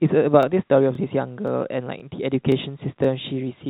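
At 0.43, 0.95, 1.48, 2.00, 2.52 and 3.04 s, a short stutter recurs in the speech, each lasting about 23 ms. These are overlapping chunks: the audio was handled in half-second blocks, and each block restarts about 23 ms before the previous one ended, so that sliver plays twice. The stutters fall roughly every 0.52 s. On a waveform, each join shows a brief repeated stretch with a discontinuity. On a spectrogram, each join shows a thin vertical line. The band-limit at 4 kHz, consistent with a G.711 mu-law call path, shows as empty spectrum above that line.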